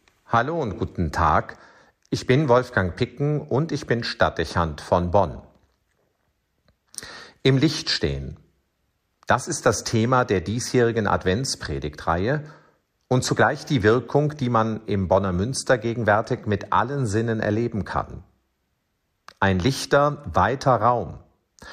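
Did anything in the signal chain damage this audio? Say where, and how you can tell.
Yes: a single sharp click at 16.27 s marks dropped samples, likely a driver or buffer glitch, where a fraction of a millisecond vanished and the waveform jumped discontinuously.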